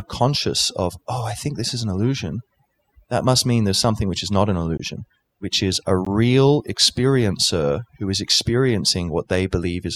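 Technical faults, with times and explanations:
Throughout, overdone noise removal: narrow frequency bands near the noise floor are pulled to nothing, leaving twinkling specks in near silence, unlike a gate's whole-signal muting.
4.78–4.80 s and 6.05 s, block of digital silence: the audio drops to silence for 20 ms and 15 ms with no fade, unlike a smoothed dropout.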